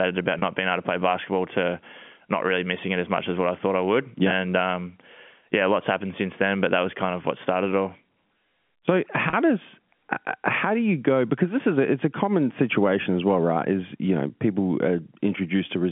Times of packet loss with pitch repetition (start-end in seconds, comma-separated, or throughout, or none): 0.39-0.42, 9.30-9.33